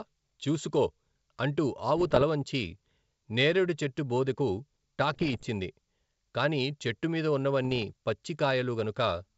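Bit errors on an ADPCM link corrupt the G.722 stream three times: 1.98 to 2.23 s, 5.13 to 5.46 s, and 7.65 to 7.83 s. Flipped bits throw off the decoder's step size and predictor, so each error keeps ringing for a few milliseconds instead of staying a single click. The result is clusters of pops, rough bursts and brief jumps in level across the speech. The middle burst is the harshest and longest, which suggests an error rate around one percent, roughly double that of the other two.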